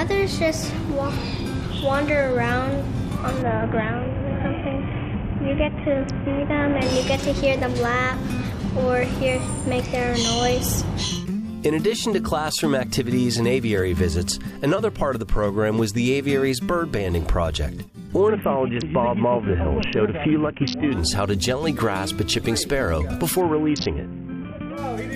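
Three Bluetooth SBC bit pool drops, at 3.42–6.82 s, 18.28–20.92 s and 23.41–24.77 s, dull the treble and add gritty grain. That fits a fall from bit pool 31 to 5, near 50 kbps. Unlike a dropout, the audio never stops; it coarsens, then recovers.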